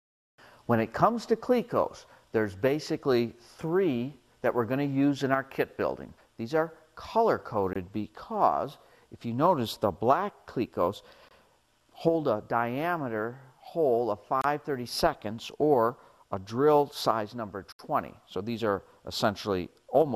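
Blocks of digital silence break the audio at 7.73, 11.29, 14.42 and 17.72 s. Each is a silent gap (about 23, 23, 28 and 70 ms) that cuts in and out hard, not a fade or concealed loss, which fits buffer underruns, the first two of 1024 samples.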